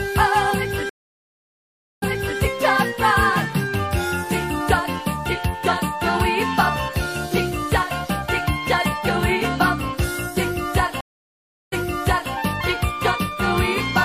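Stream reconnects occur at 0.89 to 2.39 s and at 11.01 to 12.32 s. The connection drops, leaving gaps of 1.13 s and 0.71 s. A fresh decoder then restarts mid-stream, and the audio resumes 0.37 s and 0.60 s earlier, replaying material already heard.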